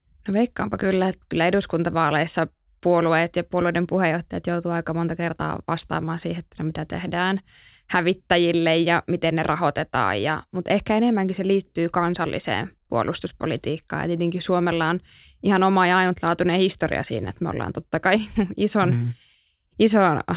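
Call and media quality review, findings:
No faults found in review.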